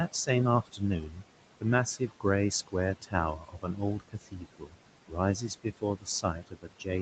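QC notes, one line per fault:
Throughout, noise suppressor artifacts: the room noise, which sits about 15 dB below the talker, is pulled down by about 18 dB wherever no one is speaking and swells back up underneath each phrase. The suppressor decides band by band, frame by frame, what counts as steady noise. Unlike a speech cut, this pumping affects the background, and the body of the voice keeps its level.
0.66–1.23 s, 1.97–2.25 s, 2.67–4.75 s and 5.08 s to the end, speech cut by the noise suppressor: here the suppressor mistakes soft parts of the speech itself for noise and turns them down with the background, by up to about 14, 12, 18 and 18 dB respectively. Roughly a third of a second, a tenth of a second and a full second of speech are swallowed in the first three spans, and the last stretch is hit through to the end. Consonants and word endings sound swallowed or faint, all within the 8 kHz band of the Opus call path.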